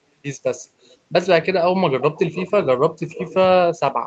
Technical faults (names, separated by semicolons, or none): echo leak